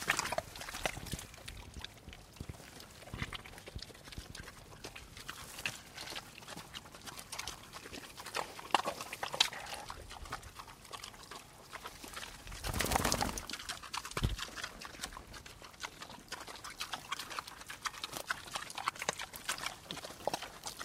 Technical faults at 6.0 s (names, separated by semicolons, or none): repeated frames